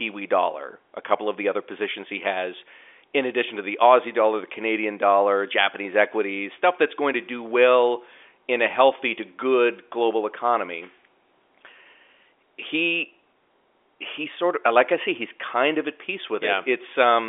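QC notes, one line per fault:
No faults heard in this telephone-band speech.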